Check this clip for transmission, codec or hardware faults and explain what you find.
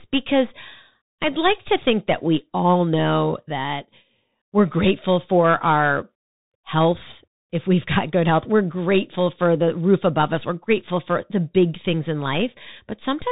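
There's one fault, and it runs the whole way through: the speech comes across a Bluetooth CVSD headset codec. Nothing gets past about 3.8 kHz, so it's muffled. CVSD sends only up-or-down steps, which fits a 64 kbps stream, so sibilants turn scratchy and a grainy hiss sits underneath.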